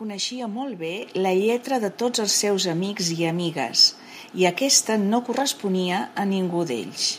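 A speech recording in which the microphone volume is stepped up at 1.02 s: the call software judged the input too quiet and raised the device gain in one jump of about 7 dB, so voice and background noise grow louder together. On a waveform the envelope widens abruptly at that point, and a spectrogram shows every band, including the noise floor, brightening at once.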